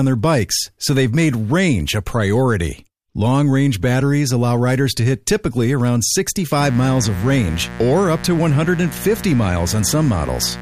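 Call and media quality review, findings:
Mains buzz, 6.60 s to end, after "to hit typically around". Raspy 60 Hz buzz, about 15 dB below speech. Probable dimmer, rectifier or unshielded cable. Switching spikes twice per cycle. Harmonics reach several kHz.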